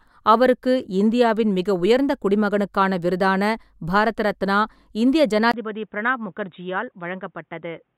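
A speech clip in which, at 5.52 s, right after "பாரத ரத்னா இந்திய", the sound drops out for about 20 ms and returns narrower and duller through to the end. Content above 3.8 kHz is gone, the level falls by a few decibels, and a faint new noise floor appears. This pattern points to an input switched to a poorer device, likely a fallback microphone or a headset call profile with its own band limit, gain and noise.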